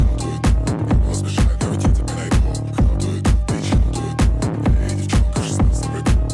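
No audible faults detected.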